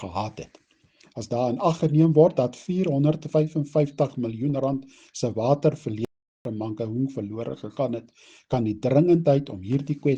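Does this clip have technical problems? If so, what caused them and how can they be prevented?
Yes. The player most likely ran short of buffered data, or its playback thread was held up, so nothing reached the output for a moment. The result is a playback stall: the sound cuts out abruptly from 6.05 s to 6.45 s, a gap of about 400 ms in mid-flow, before the audio carries on again. Keeping a larger playback buffer and running the audio thread at high priority, free of blocking work, prevents this.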